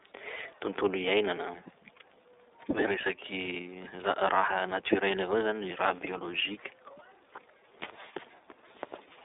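From start to finish the speech carries iLBC codec damage, plainly audible. The band runs roughly 300 Hz to 3.7 kHz, with nothing above 3.8 kHz. Each 30 ms frame is coded on its own, which fits a 13.33 kbps stream. The result sounds slightly rough and synthetic.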